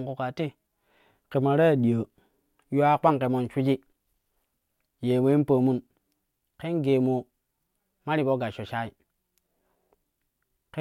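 A speech clip carrying a 100 Hz buzz throughout, from a resampler restarted on every block: each 10 ms block converted from 48 kHz to 44.1 kHz alone, leaving an edge error every block. Unlike mains hum, the buzz drops away whenever the speech pauses.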